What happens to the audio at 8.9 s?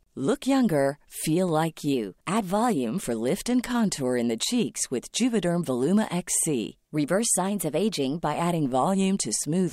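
Nothing goes wrong at 8.9 s; the speech there is intact, with no dropout, click, distortion or other fault.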